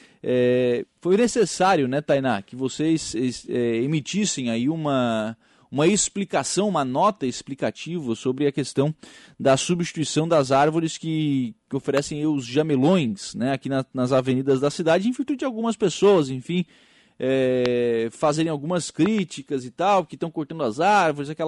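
Loud pops hit this speech at 11.98 s (after "das árvores que que"), 17.66 s (before "fazerem algumas"), and as a double pop from 19.06 to 19.21 s (before "e tal que estão"). They peak roughly 10 to 20 dB above the speech, which continues underneath. The likely cause is a sudden voltage step from a plug, switch, static or driver glitch.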